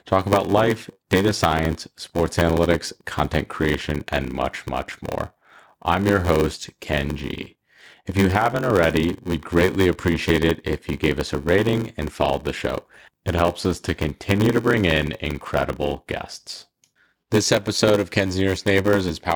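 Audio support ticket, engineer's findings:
Speech carries a steady buzz at about 93.8 Hz for the whole clip, with short dropouts chopping every block; delivery dragged to 0.861x speed, timbre unchanged. Block size mismatch (padded): upstream stage writes shorter blocks than the downstream reader takes, remainder zero-filled. Buzz rate fits a 512-sample read at 48 kHz, with roughly 441 real samples per block. Gap per block is the source of both buzz and slowdown.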